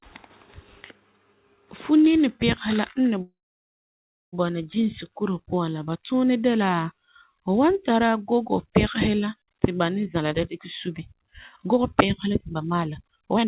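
At 3.22 s the speech stops and a call audio freeze runs to about 4.35 s. The last sound trails on briefly as a fading buzz, then roughly a second of silence follows before the speech resumes where it broke off, with nothing lost. The likely cause is delayed packets draining the jitter buffer. On a waveform this is a short decaying tail and then a flat line. A spectrogram shows a smeared, fading band and then an empty column.

From 10.06 s to 13.46 s a jitter buffer speed-up takes hold. The receiver trims short pitch-period slices again and again, about a second in total, to shrink its backlog. The speech plays at about 129% speed with its pitch unchanged and sounds rushed. A spectrogram shows syllables and gaps squeezed closer together while harmonic spacing stays the same. The waveform shows compressed envelopes. Throughout, nothing appears above 4 kHz, which fits a narrowband call codec.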